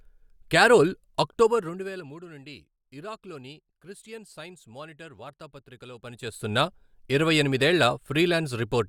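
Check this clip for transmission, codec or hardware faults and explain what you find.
No transmission, codec or hardware faults turn up in the speech here.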